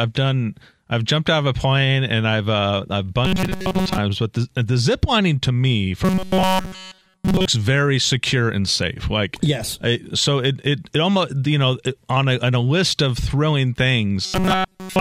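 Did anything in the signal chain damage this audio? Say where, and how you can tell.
Yes, robotic sound from repeated short buffers at 3.25–3.98 s after "and I've uh I've", 6.05–7.45 s after "zip lining to me", and 14.25 s to the end. A rigid 188 Hz buzz means a 5.3 ms slice keeps looping over skipped audio, likely a driver or buffer underrun.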